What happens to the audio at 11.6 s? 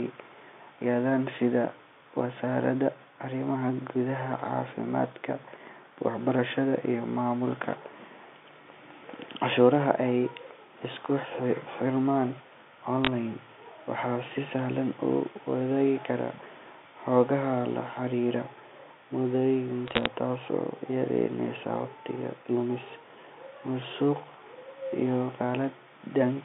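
Nothing goes wrong at 11.6 s: the speech carries on intact through that moment, heard through the narrow telephone band of G.711 coding as it is elsewhere.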